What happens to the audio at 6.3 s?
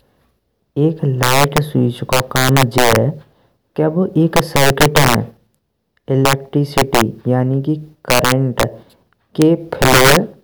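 At 6.25 to 6.33 s the speech hits integer overflow. The signal is driven about 4 dB past the integer limit. Each peak over it wraps to the opposite sign instead of being held. The result is violent cracks, far harsher than ordinary clipping.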